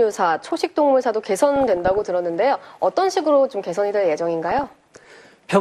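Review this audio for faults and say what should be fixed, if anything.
MP2 compression, throughout: the sound is dull, with a gurgling, granular edge. Upper sub-bands switch off and flicker back, and the bands that remain are coarsely quantised. This likely comes from MPEG Layer II coding at a low bitrate, which fits about 80 kbps. Encoding at a higher bitrate or with a more efficient codec would prevent it.

DAB burbling, from 1.56 to 2.07 s and from 4.49 to 5.21 s: short blips of noise ride over the sound. Corrupted samples put brief noise blips into single sub-bands, and corrupted scale factors make sub-bands jump in level for up to a frame. This points to a bit error rate under one percent getting past error correction. Stronger reception through a better antenna or a stronger transmitter signal would prevent it.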